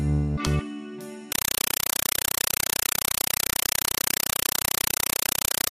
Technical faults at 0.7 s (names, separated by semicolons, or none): none